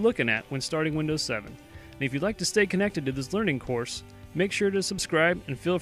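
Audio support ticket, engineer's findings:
Nothing to flag here, no faults turned up anywhere in the recording on my listen.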